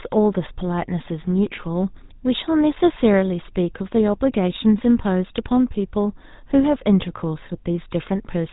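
From start to finish the speech carries the sound of the GSM full-rate codec. Nothing above 3.8 kHz survives, so it sounds narrow and dull. The vocal tract is rebuilt from a sparse pulse excitation. That gives a clearly audible buzzy, gravelly roughness, which fits a 13 kbps rate.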